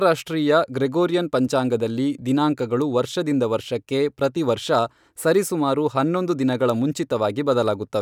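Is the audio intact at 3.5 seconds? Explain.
Yes, the audio at 3.5 seconds is intact, with no audible fault at that moment.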